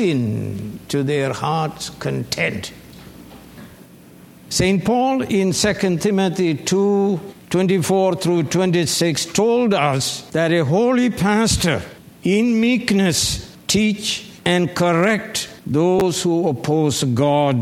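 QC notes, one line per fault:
15.99–16.01 s, chunks out of order: two short blocks of about 11.6 ms each play swapped, the later one first. All the audio is present but misordered, so the brief jumble carries three hard joins. Unlike a dropout there is no gap or silence, and unlike a repeat or stutter no material is heard twice.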